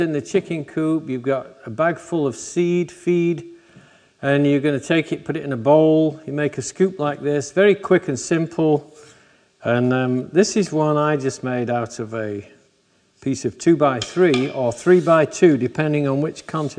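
No technical fault can be heard anywhere in the audio, and the signal stays steady and intact throughout.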